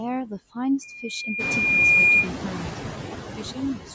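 Throughout this speech clip, the room noise dips slightly between phrases and swells back under them. These are noise suppressor artifacts: the suppressor turns down, frame by frame, the bands it judges to be steady noise, here by only about 4 dB. The effect grows more exposed after around one and a half seconds, when the room noise rises by about 15 dB to sit about 12 dB below the speech.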